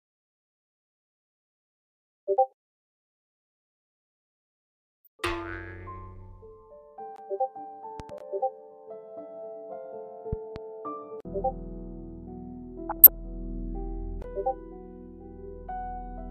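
A voltage step, likely from a switch or plug, enters the signal twice, giving loud pops about 15 dB above the audio, each heard as a quick double, at 8.00–8.12 s and 10.33–10.58 s. From 12.89 to 13.19 s, weak DAB reception lets bit errors at a fraction of a percent corrupt MP2 sub-band data, causing DAB burbling across roughly a dozen frames.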